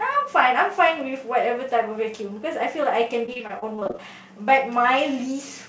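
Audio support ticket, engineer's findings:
Repeated packet loss (robotic sound), 3.26–4.00 s: choppy speech with pieces missing from a burst of short dropouts, longest about 28 ms, each patched by extending prior audio; roughly a quarter of the span concealed. Likely jitter buffer or network. Call path band-limited at 8 kHz, consistent with G.722.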